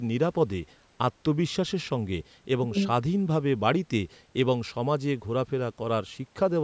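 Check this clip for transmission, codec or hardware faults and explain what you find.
No transmission, codec or hardware faults are audible in this speech recording; it has passed through a call's microphone processing, which trims the lowest bass and leaves nothing above 8 kHz, as that path normally does.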